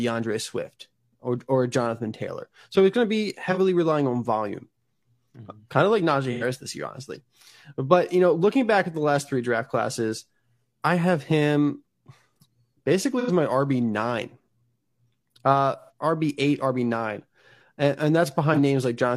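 The speech carries AAC frame loss with concealment five times: at 3.51 s, 6.32 s, 13.19 s, 15.79 s and 18.53 s. Each time, the decoder lost data and rebuilt the gap from the last good spectrum. The gaps at 3.51 s and 18.53 s last about 43 ms, which fits one lost frame. The others last about 85 ms, which fits two. Each patch sounds smeared or phasey; the first two fall just before "relying on volume" and "this year honestly".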